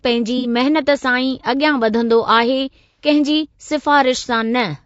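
Throughout, the speech sounds rough and grainy, with noise between harmonics and a synthetic top band, most likely from low-delay AAC compression at roughly 32 kbps. At 0.38–0.47 s and again at 2.81–3.07 s, AAC frame loss with concealment fills each gap with a smeared, noisy patch rebuilt from the preceding spectrum. Unlike a plain dropout, there is no silent hole.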